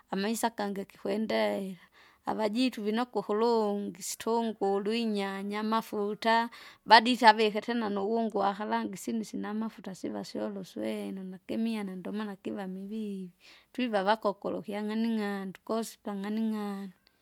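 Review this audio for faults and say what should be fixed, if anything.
From 7.42 to 10.79 s, just before "nakimiana ndomana kiva", the speech turns dull and muffled: de-emphasis applied wrongly, a treble-cut filter sloping down to about 8 dB at 10 kHz on audio that was never pre-emphasised or was already de-emphasised. To prevent it, apply de-emphasis only where matching pre-emphasis is confirmed, and only once in the chain.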